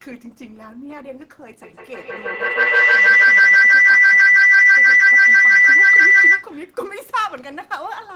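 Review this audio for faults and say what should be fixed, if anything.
A piercing tone near 2 kHz swells from 1.62 s to 6.53 s, peaking about 19 dB above the speech, with a loop delay of roughly 150 ms. This is feedback howl: two devices in one room share the call, so each loop trip adds gain. Keep only one device unmuted per room.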